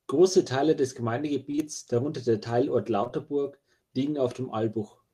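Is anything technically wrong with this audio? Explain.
Yes: a brief smeared wobble just before "darunter der", from 1.51 to 1.60 s, and again from 3.04 to 3.11 s, is short concealed packet loss. Two consecutive 20 ms chunks of speech arrived too late each time, and the receiver patched them by extending the preceding sound before blending back.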